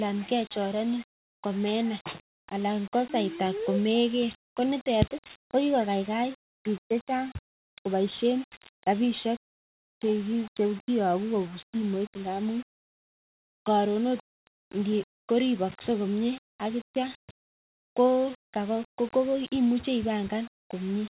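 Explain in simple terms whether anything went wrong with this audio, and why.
No, nothing went wrong here: the speech comes through without any dropouts, glitches or other faults to point at.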